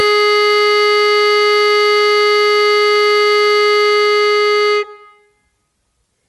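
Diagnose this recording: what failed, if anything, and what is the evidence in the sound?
Codec stage: likely Bluetooth LC3 compression throughout the music. Its grainy top end stops at 11.6 kHz on a spectrogram, which fits a 48 kbps link.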